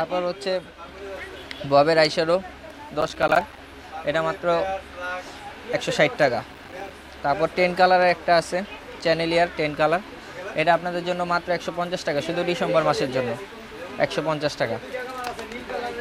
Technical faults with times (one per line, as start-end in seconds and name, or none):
3.01-3.58 processor overload crackle
6.53-6.90 processor overload crackle